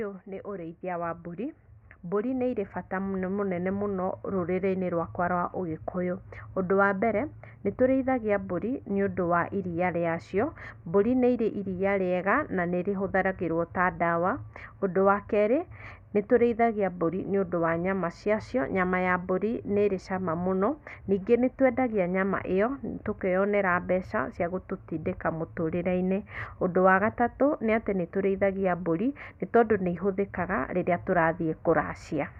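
From 0.25 s to 13.13 s the level climbs slowly and steadily, with the speech and the background noise behind it swelling together by about 10 dB over those thirteen seconds. This is automatic gain rising: the automatic gain control judged the incoming signal too quiet and kept raising its gain step by step. Because it amplifies everything it receives, the background noise rises in lockstep with the voice.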